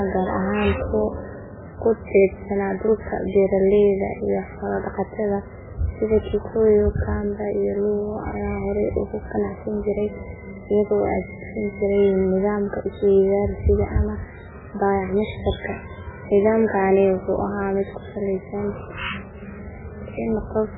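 From start to end, the speech sits under heavy codec damage, likely MP3 compression at a very low bitrate, around 8 kbps. Nothing reaches above 3.8 kHz, leaving it dull, and weak frequency lines dropping in and out frame to frame give a watery, swirling texture with smeared attacks.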